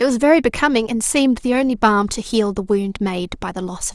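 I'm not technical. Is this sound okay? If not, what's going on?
Yes, this sound is okay; there's nothing going on that needs fixing.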